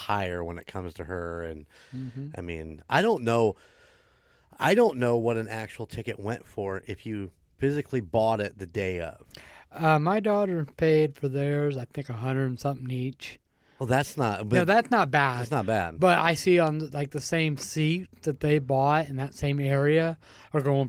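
The speech shows no technical faults, and it carries Opus voice compression working at about 24 kbps in hybrid mode with the full audio bandwidth kept.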